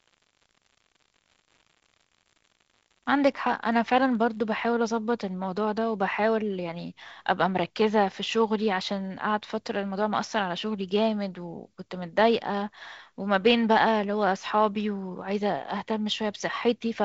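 From the start to 4.42 s the speech carries an unreliable data bit. One marginal data line flips its bit in a random share of samples, so each error lands as a spike of identical size, giving a steady, even fizz that keeps going through the pauses. That uniformity sets it apart from clipping or impulsive crackle, which follow the loudness of the signal. The band-limited sound, with nothing above about 7.8 kHz, fits G.722 wideband coding near 48 kbit/s.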